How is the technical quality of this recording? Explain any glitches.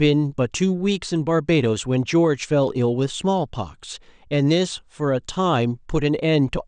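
No technical glitches can be heard in this recording. The speech runs without any interruption, dropout or audible defect.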